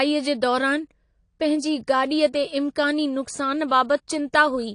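Throughout the speech, AAC compression damage is plainly audible. Nothing sounds above 10.1 kHz, so the top end is dull and smeared. This likely comes from AAC-LC encoding at about 32 kbps, where the encoder trades treble and fine spectral detail for bitrate.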